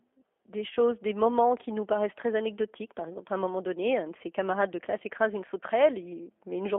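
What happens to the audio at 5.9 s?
The speech at 5.9 s sounds slightly rough, synthetic and boxy, as it does throughout the clip, with nothing below about 250 Hz or above 3.4 kHz. That is G.729 codec damage, which fits an 8 kbit/s model-based rebuild of speech rather than a faithful copy.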